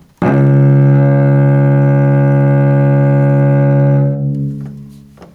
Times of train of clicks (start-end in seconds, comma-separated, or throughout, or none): none